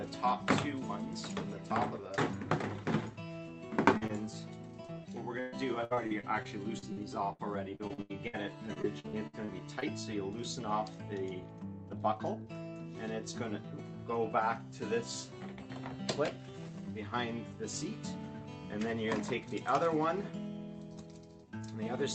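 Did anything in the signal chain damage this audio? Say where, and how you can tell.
Yes, at the network stage. Short concealed packet loss: brief smears at 3.97–4.03, 4.07–4.11 and 4.87–4.90 s, where the receiver extended the preceding sound over missing audio.

Repeated packet loss (robotic sound) from 5.40–8.35 and 8.73–9.84 s. Choppy patching fills about a fifth of each stretch, with gaps up to 121 ms.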